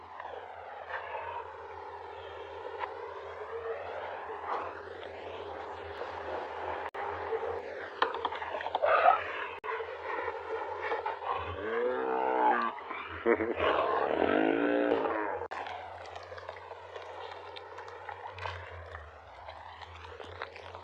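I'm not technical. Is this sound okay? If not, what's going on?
No, there are two problems. From 5.98 to 7.59 s there's a doubled audio track: a quieter copy trails about 0.4 seconds behind, likely from the sound being captured twice. There are also two gaps at a join of encoded pieces, brief dropouts of about 54 ms at 6.89 s and 50 ms at 9.59 s, where separately saved chunks were stuck together with their built-in silences left in.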